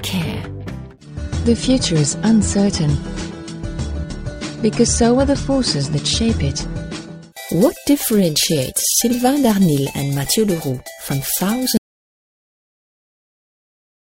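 At 11.77 s the sound cuts out abruptly and never returns, leaving silence with no room tone through to the end of the clip. This is an audio dropout to silence, likely from the input being lost while the recorder kept writing silence.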